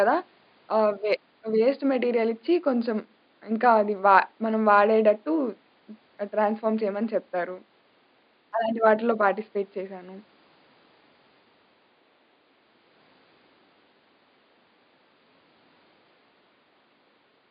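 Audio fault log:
Nothing to log here, as the speech comes through with no faults at all, and the faint room noise sitting about 42 dB below it is just part of the recording space.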